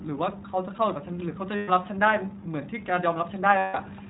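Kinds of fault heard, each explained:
iLBC codec: The speech passes through a narrowband VoIP codec that codes each 20 ms frame independently, at a rate that fits 15.2 kbps. Nothing above 4 kHz survives, so the voice sounds dull, slightly rough and synthetic, with plainly audible coding damage throughout.
lost iLBC frames: Packets went missing, and the decoder filled each gap by repeating the last pitch cycle mixed with noise. This happens from 1.56 to 1.70 s and from 3.58 to 3.76 s, each heard as a held, buzzy, breathy vowel before the voice snaps back.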